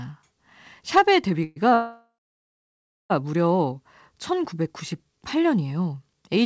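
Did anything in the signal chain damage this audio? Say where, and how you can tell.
Yes. Call audio freeze at 1.44–1.58 s and 1.74–3.12 s, in the network jitter buffer. Each gap holds a fading continuation of the last sound, the longer one ending in about a second of silence. Speech then resumes intact but late, likely because delayed packets drained the buffer.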